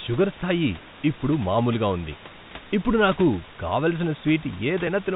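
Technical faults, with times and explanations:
No technical faults can be heard in this clip.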